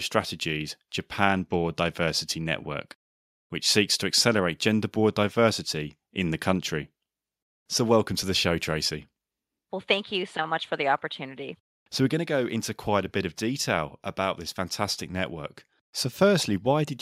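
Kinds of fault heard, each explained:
No faults detected in the speech; nothing to log.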